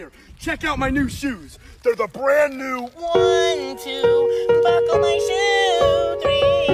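Nothing technically wrong turns up in this bit of audio, so there's no fault to point to here.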